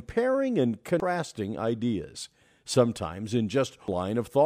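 Damaged data in a compressed stream corrupts this speech clip twice: the decoder misreads corrupted frames and loses sync while hunting for the next valid header, giving a disruption from 0.63 to 1.00 s and a brief blip at 3.88 s.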